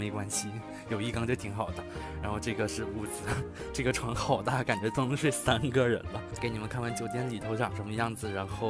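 Nothing technically wrong can be heard anywhere in this audio. No interruption, distortion or other defect stands out at any point.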